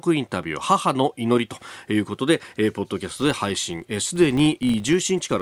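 From 3.07 s onward, a filter restarted on every block starts each from zero state, producing a level-following 46.9 Hz buzz that fits 1024-sample blocks.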